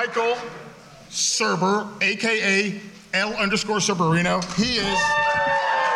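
No technical faults can be heard anywhere here.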